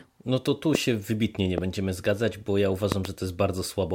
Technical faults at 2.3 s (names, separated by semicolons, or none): none